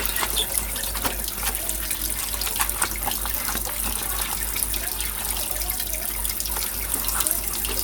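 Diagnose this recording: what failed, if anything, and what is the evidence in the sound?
The failure is at the codec stage: compressed frames skipped. At about 1.05 to 1.08 s the sound jumps forward, losing roughly 70 ms, or about three frames at the 20 ms frame length the gap suggests. The frames never reached the output, either because they were missing from the file or because the decoder rejected them as corrupt.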